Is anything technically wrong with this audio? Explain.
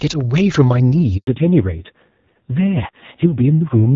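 Yes, there are two faults, and one follows right after the other.

A handover gap runs from 1.17 to 1.27 s. While the call switched networks, no speech frames arrived for about 100 ms, so the voice dies away within a few tens of milliseconds into silence. Whatever was spoken in that window is simply gone.

A fallback to narrowband follows from 1.27 s to the end. The call leaves HD Voice, whose earlier stretch sounds clear and consistent with AMR-WB around 12.65 kbit/s, for a low-rate narrowband codec, likely AMR-NB near 5.9 kbit/s. Nothing above 4 kHz survives, so the speech turns muffled, duller and rougher.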